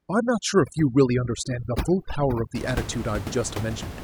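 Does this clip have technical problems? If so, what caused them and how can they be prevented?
Yes. From 0.0 to 2.55 s the background falls to near silence broken by twinkling specks. This is overdone noise removal: the reducer was set so hard that it pulls individual frequency bands down or out whenever they sit close to its noise estimate, taking quieter parts of the speech along with the background noise. The room noise, about 10 dB below the speech, returns after that point. To prevent it, use gentler reduction depth and let some room noise remain.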